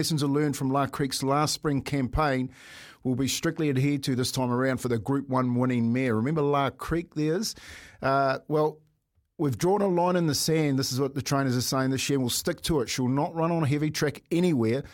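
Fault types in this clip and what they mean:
No technical faults are audible in this recording.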